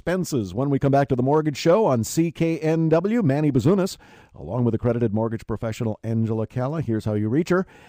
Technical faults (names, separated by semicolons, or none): none